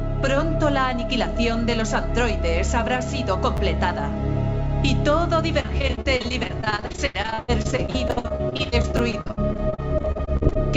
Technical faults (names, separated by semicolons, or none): chunks out of order; repeated packet loss (robotic sound)